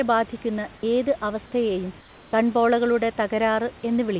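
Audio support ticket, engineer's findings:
Comfort noise in place of the background, 2.0–2.33 s, after "ബാധിക്കുന്ന ഏത് അവസ്ഥയെയും": room tone becomes steady, featureless hiss about 3 dB quieter, not silence. Likely DTX at sender.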